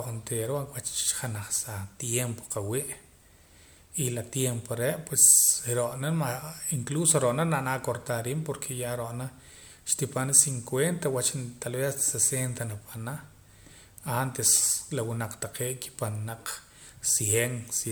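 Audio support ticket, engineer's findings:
Speech, throughout: swirly, smeared, hollow texture, consonant attacks blurred, content reaching up to 20.1 kHz. Likely generation loss, a few successive MP3 passes at around 128 kbit/s, each requantising on a shifted frame grid so noise and spectral holes accumulate. Unlike a single low-bitrate encode, the bandwidth stays wide while the smearing is worse than that rate alone would give.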